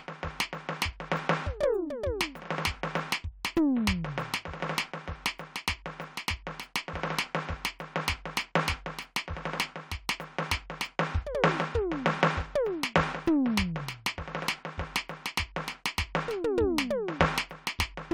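No technical faults are audible.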